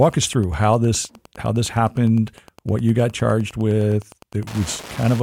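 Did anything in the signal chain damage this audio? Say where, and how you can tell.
Yes: Wi-Fi interference throughout, a tick every 102.4 ms roughly 25 dB under the speech, as the analogue wiring rectifies a nearby radio's beacon bursts.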